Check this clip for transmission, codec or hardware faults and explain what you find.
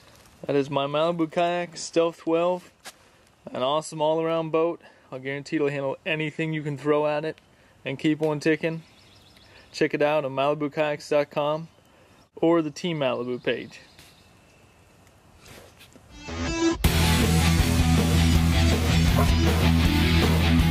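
No transmission, codec or hardware faults.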